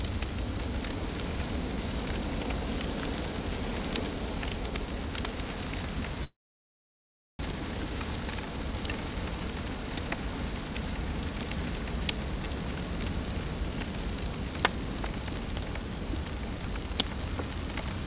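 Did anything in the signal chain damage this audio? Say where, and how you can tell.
Yes, two faults, both on the network side of a call path whose band already stops at 4 kHz, which fits G.711 mu-law at 64 kbps.

Network: a long network dropout runs from 6.24 s to 7.45 s. The sound stops, the receiver briefly extends the last fragment as a fading buzz, and then about 1.08 s of silence follows. When audio resumes at 7.45 s, roughly a second of material is simply absent. This is most likely a burst of lost packets. The concealment filled the gap but had nothing to rebuild it from.

Jitter buffer: a jitter buffer speed-up follows from 7.52 s to 8.74 s. The sound plays at 111% speed with its pitch unchanged, so it feels rushed and loses its natural timing. After the outage the buffer was holding excess delay, roughly 150 ms, and the receiver trimmed it by cutting out short pitch-period segments in quick succession until playback caught up.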